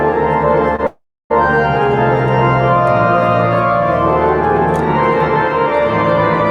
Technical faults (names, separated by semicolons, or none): short stall from a late packet; call audio freeze